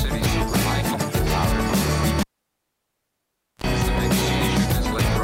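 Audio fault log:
2.20–3.64 s, cable pulled and plugged in: a pop as the live lead disconnects, then about 1.38 s of near silence. A 45 ms burst of 60 Hz mains buzz follows while only the plug tip makes contact, and a second pop marks the signal's return.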